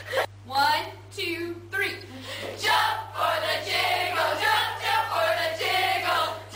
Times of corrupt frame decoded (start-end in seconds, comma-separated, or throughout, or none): 2.00-2.03